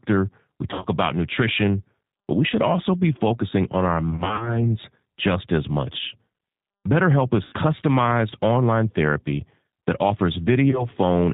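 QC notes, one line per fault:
throughout: G.729 codec. The speech is band-limited with nothing above 4 kHz and has a plainly audible rough, slightly synthetic texture at 8 kbit/s. It is rebuilt from a vocal-tract filter and sparse pulses, unlike the clean but dull band-limiting of plain telephone filtering.
0.71–0.86 s, 4.11–4.67 s, 7.44–7.54 s, 10.71–10.88 s: VoIP packet loss concealed by the speech codec. About 100 ms goes missing before "about nutrition but we" in runs up to 50 ms. About 130 ms is scattered across 300 ms between "be focusing on our" and "just as much". Losses of about 80 ms and 20 ms follow. The decoder extends the last pitch and filter into a fading buzzy tone or coloured noise, and the speech stays weak briefly afterwards. That sets this apart from a hard dropout to silence.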